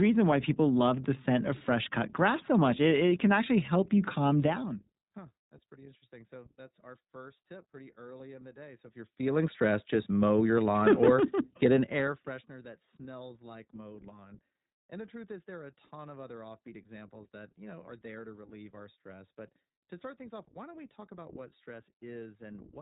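From start to finish the speech carries iLBC codec damage, and it is plainly audible. Nothing above 3.8 kHz survives, so the sound is narrowband and dull. Each short frame's excitation is coded on its own, without drawing on the previous frame. That gives the speech a rough, synthetic texture, which fits the 20 ms frame mode at 15.2 kbps. The gradual level changes come through as smooth fades.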